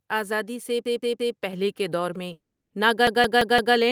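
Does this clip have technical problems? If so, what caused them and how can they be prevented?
Yes. There are three kinds of fault.

Repeated buffer: From 0.85 to 1.37 s, a 171 ms piece of speech plays three extra times. From 3.07 to 3.76 s, the same-length piece plays four extra times. Both times the device ran out of fresh audio and replayed its last buffer, which fits an 8192-sample buffer, so very little speech is lost. Each repeat meets the next with a hard join, and the result sounds like a stutter. On a spectrogram this shows as identical blocks side by side with sharp vertical edges at each join. A larger playback buffer or higher audio-thread priority prevents this.

Microphone volume stepped up: At 1.53 s the level jumps by about 5 dB in a single step. The call software's automatic gain raised the microphone input, so the voice and the background noise get louder together. On a waveform the envelope steps up abruptly, and on a spectrogram the noise floor brightens at the same moment. 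Setting the input level correctly beforehand and turning off automatic microphone gain prevents this.

Long network dropout: At 2.33 s the sound stretches into a fading buzz, then about 0.31 s of silence follows until 2.73 s. The speech resumes with about 380 ms missing. The likely cause is a burst of lost packets that the receiver concealed by extending the last sound. On a spectrogram this looks like smeared, decaying energy followed by a blank gap. A more stable connection, such as wired instead of Wi-Fi, and a larger jitter buffer prevent this.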